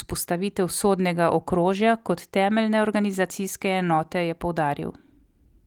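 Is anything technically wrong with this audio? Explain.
No, no technical faults heard.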